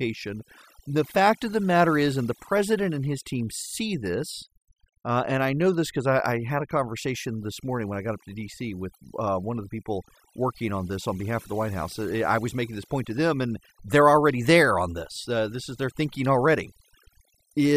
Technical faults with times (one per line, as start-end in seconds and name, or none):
0.00-17.77 overdone noise removal